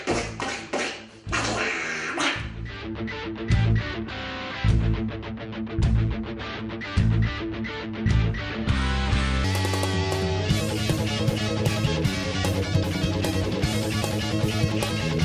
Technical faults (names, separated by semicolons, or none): wrong sample rate